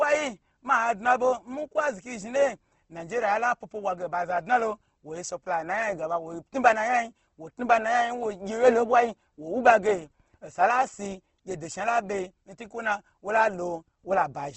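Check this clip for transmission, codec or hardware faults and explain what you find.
Throughout the speech the sound is rough and grainy, with a clearly audible coarse, noisy texture on voiced sounds, and nothing reaches above about 8.2 kHz, so sibilants lack air. The likely cause is Opus compression in its CELT mode at a wideband setting. At a rate that points to roughly 16 kbps, the encoder keeps each band's energy but fills short-changed bands with noise or folded copies of lower ones, which produces that granular roughness instead of holes.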